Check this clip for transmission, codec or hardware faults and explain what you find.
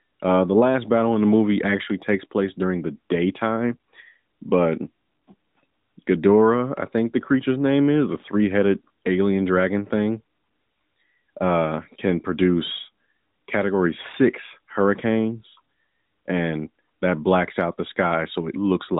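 Nothing stood out on listening to this speech clip.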